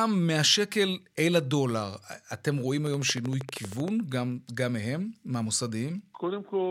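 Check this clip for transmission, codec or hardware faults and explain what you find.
A train of clicks runs through the speech from 2.87 s to 3.89 s. About fifteen near-identical pulses arrive at a regular 12.8 per second, peaking roughly 10 dB above the speech, so they sit clearly on top of it as an even ticking that persists through any gaps. Such a steady, repeated impulse most likely comes from electrical interference from nearby equipment or a faulty connection or power supply.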